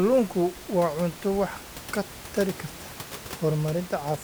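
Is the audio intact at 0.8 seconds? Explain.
Yes, the audio is intact at 0.8 seconds, with only the room's own background noise sitting about 16 dB below the speech, as part of the recording.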